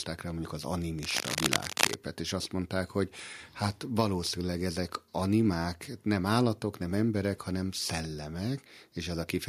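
A speech recording with a burst of cable scratch noise from 0.98 to 1.94 s: for just under a second a dense, ragged scratching and rustling sits over the speech, roughly as loud as the speech itself, then stops. The likely cause is a worn cable, connector or control being moved during the take, so its contact resistance jumped about rapidly and dumped those irregular noise bursts straight into the signal.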